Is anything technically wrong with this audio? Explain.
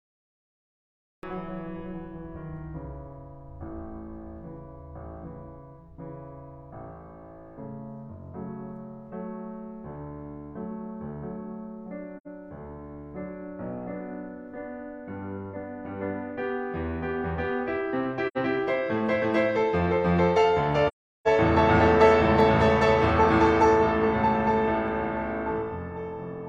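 Yes, there are two problems in this music clip.

The first is a cut-off start. The clip opens with digital silence from 0 to 1.23 s, and the music then begins abruptly at 1.23 s, partway through a sound, with no attack or fade-in. The recording or stream began late, so its first moments were never captured. A deliberate fade-in would rise gradually from near silence. Here the level jumps straight from nothing into the music.

The second is AAC frame loss with muting, heard three times. There are short holes at 12.17 to 12.27 s and 18.27 to 18.37 s, each about 85 ms long, which fits two lost AAC frames. A longer gap runs from 20.88 to 21.28 s, about 384 ms, consistent with roughly nine frames. The decoder zeroed the missing spectrum, and the overlapping windows taper the music out and back in. Unlike a hard dropout, these gaps have soft edges.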